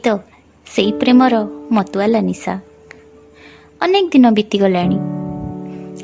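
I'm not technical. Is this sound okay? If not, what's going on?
Yes, nothing in this recording points to a technical problem with how it was captured or played back.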